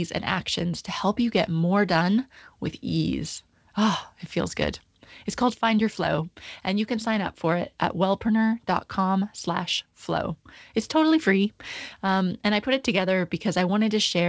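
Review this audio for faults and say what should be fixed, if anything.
No faults were found; nothing needs fixing.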